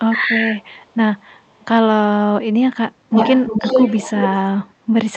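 Speech over a call link whose audio tops out around 8 kHz, with two kinds of fault. From 0.20 to 0.56 s the talker dips by a few decibels while the far side's sound plays on the loudspeaker. This is speech suppressed in double talk, likely from an echo canceller unable to tell the near talker from loudspeaker echo and so turning both down. Echo leak follows at 0.62 to 0.96 s and 1.18 to 1.65 s, very faint at first and then slightly stronger. From 3.09 to 4.36 s it becomes a copy about as loud as the speech. Each copy trails the voice by 346 ms, likely because a far-end loudspeaker's canceller let its microphone pick-up through. The fixed delay and recognisable repeated speech distinguish it from room reverberation, which smears continuously rather than repeating after a gap.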